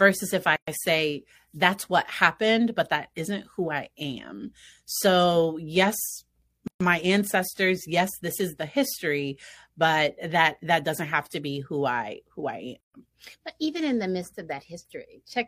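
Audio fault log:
0.56–0.68 s, 6.68–6.81 s, 12.81–12.94 s: gap at a join of encoded pieces. The speech breaks off for about 116 ms before "say that's what happened", 130 ms before "my ancestors yes this", and 130 ms after "who I who I". These silences fall every 6.0 s, where separately encoded pieces meet and their untrimmed start delay and final-frame padding remain. Unlike a dropout, the speech resumes exactly where it stopped and nothing is lost.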